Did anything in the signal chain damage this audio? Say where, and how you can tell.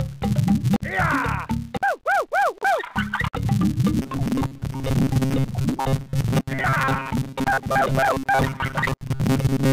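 Yes. A filter restarted on every block runs through the whole clip: a steady 200 Hz tick-buzz that rises and falls with the signal level. A processing stage is clearing the filter's memory every 5 ms block, so each block opens with a small transient.

From 3.98 s to 9.72 s, robotic sound from repeated short buffers takes over: a rigid, metallic 134 Hz buzz that loosely tracks the sound. The driver or buffer stage is likely starved, looping roughly 7.5 ms segments to cover about half the time while real audio is skipped.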